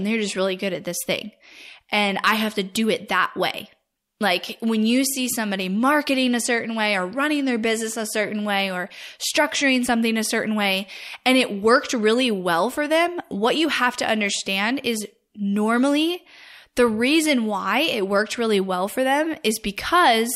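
No technical faults can be heard anywhere in the speech recording. There is nothing in it that needs a time or a description.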